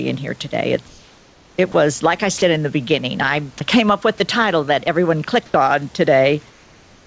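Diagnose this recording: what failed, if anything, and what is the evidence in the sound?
Gain pumping runs through the whole recording. The stage is capture gain and call processing. Loud and soft parts end up closer in level, with a gain swing of a few decibels. The likely cause is input gain set too high, with a fast limiter pulling it back down on every peak.

Comfort noise in place of the background appears from 0.88 to 1.58 s and from 5.46 to 5.54 s, just after "the title that everyone". The stage is call processing. The textured room sound turns flat and steady. It is about 2 dB quieter in the first span and about 1 dB louder in the second. The sender likely stopped transmitting in silence, and the receiver synthesised noise for 700 ms and then 80 ms.

The voice detector dropped sound at 1.72 to 1.74 s, just before "like I", and at 2.38 to 2.42 s, between "like I" and "in the beginning". 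The stage is call processing. Brief slivers of speech, 20 ms and 40 ms long, give way to flat noise. The detector likely treated these quiet sounds as background and substituted comfort noise.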